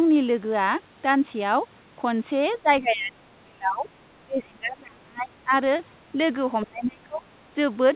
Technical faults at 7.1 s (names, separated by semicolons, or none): speech suppressed in double talk